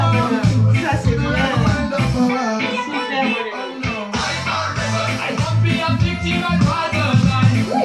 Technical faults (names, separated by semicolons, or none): none